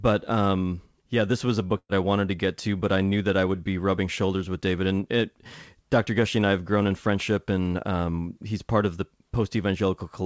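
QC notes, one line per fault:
1.78–1.91 s, burst of packet loss: right after "yeah this was a", the last sound stretches into a held, fading buzz for about 110 ms, then goes silent before "I wanted to get" resumes with about 120 ms of speech missing. The receiver repeated and faded the final audio to cover packets that were lost or arrived too late.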